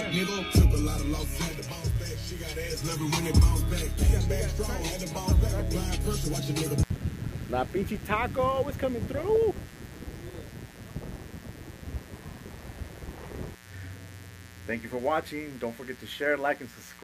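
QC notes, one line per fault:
0.97–17.03 s, mains buzz: a steady, raspy buzz sits roughly 25 dB under the sound from just before one second to the end. Sharp 60 Hz switching spikes spread harmonics into the kilohertz range, so it sounds gritty, unlike the smooth, low tone of plain hum.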